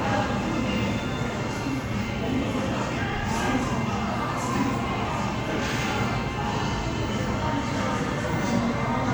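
No technical faults can be heard anywhere in this audio.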